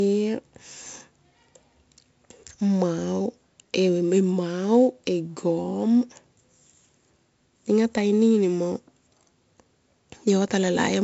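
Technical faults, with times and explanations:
Throughout, 4-bit ADPCM compression: each sample is coded as a coarse 4-bit step from a prediction, so heavy gritty hiss rides every loud stretch and sharp onsets distort. A spectrogram shows level-following noise haze and a hard ceiling near 8 kHz, which fits a 64 kbps stream.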